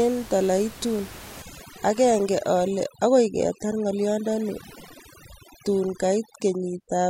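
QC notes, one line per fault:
1.42–7.1 s, overdone noise removal: aggressive spectral gating mutes bands near the room-noise floor (about 19 dB below speech), leaving twinkling residue and dropping quiet parts of the voice.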